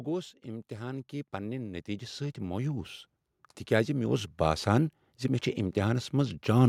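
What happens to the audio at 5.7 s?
Nothing goes wrong at 5.7 s: the speech carries on intact through that moment, with no dropout, click or distortion.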